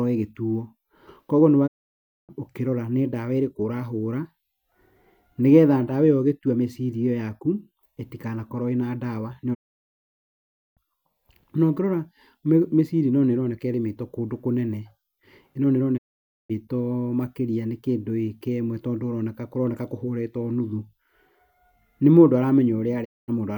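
The speech fades to silence within 20 ms at 1.66, 9.53, 15.96 and 23.04 s, for 0.61, 1.22, 0.51 and 0.22 s: digital broadcast dropouts, the receiver muting through lost or corrupted frames.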